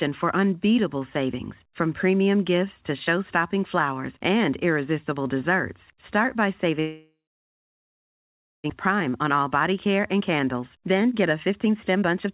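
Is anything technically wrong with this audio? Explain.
Yes. From 6.8 to 8.72 s there is a long network dropout, most likely a loss of incoming packets. The receiver stretches the last sound into a fading buzz, then leaves about 1.5 s of silence, and about a second of audio never returns.

From 8.89 s to the end at 12.34 s there is a jitter buffer speed-up. After the outage the buffer held roughly a second of extra delay, so the receiver cut tiny pitch-period slices to drain about half a second. The sound plays at 117% speed with unchanged pitch and feels hurried.

The G.711 A-law call path leaves nothing above 4 kHz, which is normal for that codec.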